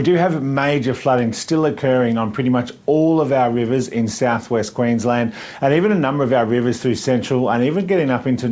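No technical faults are audible; the band stops at 8 kHz, as expected from a wideband call path consistent with G.722.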